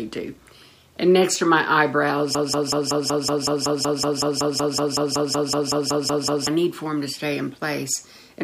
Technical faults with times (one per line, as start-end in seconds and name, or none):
2.35-6.47 broken-record loop